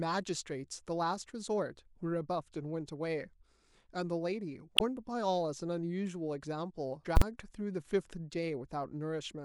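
At 4.74 to 4.81 s the speech breaks up briefly. That is damaged data in a compressed stream. The decoder hits corrupted bytes, loses frame sync and searches for the next frame header. A briefer blip at 7.02 to 7.06 s has the same cause.

Just after, from 7.17 to 7.22 s, comes a loud bang. These are invalid numbers at full scale. A calculation produced infinite or invalid values, pinning the output at one extreme value for about 46 ms. That fits a 2048-sample processing block.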